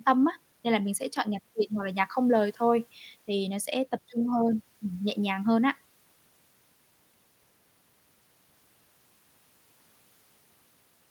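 No technical faults can be heard anywhere in the recording.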